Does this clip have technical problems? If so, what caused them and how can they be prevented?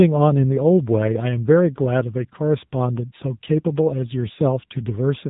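Yes. The whole speech clip has been through the AMR narrowband mobile codec, and its damage is plainly audible. AMR-NB samples at 8 kHz and rebuilds speech from a vocal-tract filter excited by a handful of pulses per subframe. Here nothing above 3.8 kHz survives, and the buzzy, synthetic edge suggests one of the codec's lower modes, around 8 kbps. On a spectrogram, energy stops at a hard ceiling near 3.8 kHz, with blank space above it from start to end. Harmonics look smeared and grainy rather than cleanly striated.

To prevent this, record or transfer the audio over a wideband path such as VoIP with a wideband codec, or as a direct file rather than over a narrowband phone call.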